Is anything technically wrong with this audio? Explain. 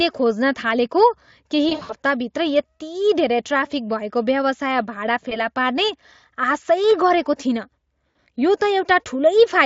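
Yes. There is VoIP packet loss concealed by the speech codec at 1.69–1.93 s, 5.29–5.38 s and 8.11 s. The decoder fills the gaps by repeating its last pitch and filter at falling gain, so the speech turns buzzy and fades, then takes a moment to recover. The worst patch is near 1.7 s, with about 140 ms missing across 200 ms and runs up to 60 ms. On a spectrogram these appear as smeared, evenly spaced harmonic bands that fade out. The waveform shows a repetitive, decaying stretch. The Speex encoding itself sounds clean.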